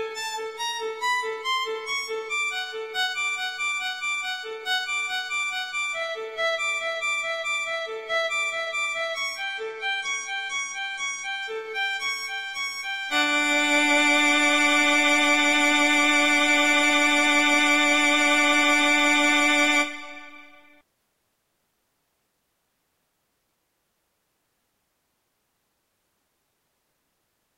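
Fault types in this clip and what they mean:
Adaptive stream at a lower bitrate: from about 9.43 to 11.43 s the stream steps down when the connection sags, with no gap. The top end stops near 11 kHz, which fits a jump from mid-rate AAC to very low-rate HE-AAC.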